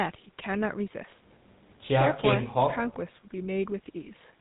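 The speech runs through a GSM full-rate codec from start to finish, which fits the old 13 kbps mobile standard. The codec rebuilds the sound from a vocal-tract model driven by coarse, regularly spaced pulses and discards everything above 4 kHz, so the speech comes out muffled, with a plainly audible buzzy, gravelly roughness.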